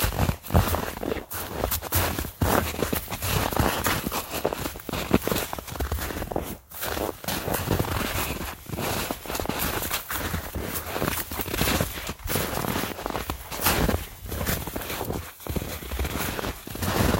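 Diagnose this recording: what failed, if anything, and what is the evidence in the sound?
Nothing stood out on listening to these everyday sounds that would point to a failure at any stage of the chain.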